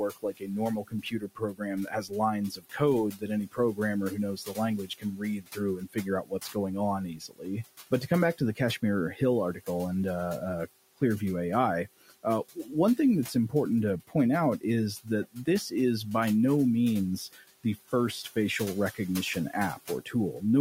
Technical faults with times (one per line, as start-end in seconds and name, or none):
0.00-20.61 noise suppressor artifacts
0.09-9.68 speech cut by the noise suppressor
12.01-13.53 speech cut by the noise suppressor
14.08-15.73 speech cut by the noise suppressor
17.32-17.93 speech cut by the noise suppressor
18.59-20.42 speech cut by the noise suppressor